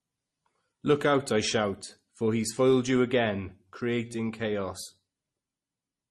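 Speech, with transcoding between lossy codecs audible throughout. Two different sets of compression artefacts sit on top of each other. Nothing reaches above 12.2 kHz. The sound fits a low-bitrate MP3 likely re-encoded to Opus, the second encoder spending bits on the first's damage.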